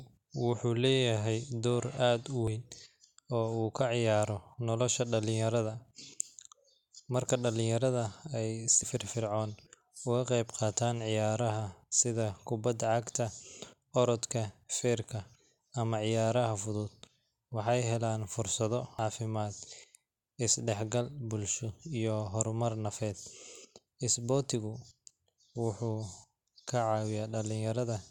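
At 2.48 s and 8.83 s the speech jumps forward, losing around 40 ms each time; at 18.99 s there is a larger skip of about 150 ms. With no silent gap, unlike an underrun, a dropped buffer (overrun) is the likely cause.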